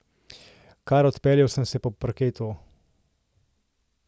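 No audible faults anywhere in the speech recording; nothing to flag.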